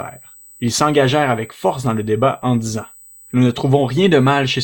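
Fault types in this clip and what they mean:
USB whine: a steady, fixed-pitch whine at 8 kHz with its strongest part at the 16 kHz harmonic, running under the speech the whole way, roughly 30 dB down. It's current drawn in the bus's 125-microsecond microframes leaking in through power or ground.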